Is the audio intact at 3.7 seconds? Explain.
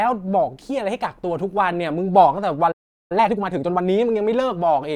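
No. At 3.7 seconds the speech sits inside a time-compressed catch-up running from 3.12 to 3.88 s, where small slices are cut out and cross-faded to play about 1.5 times faster at unchanged pitch. It sounds rushed; a spectrogram shows squeezed syllables and harmonics at unshifted frequencies.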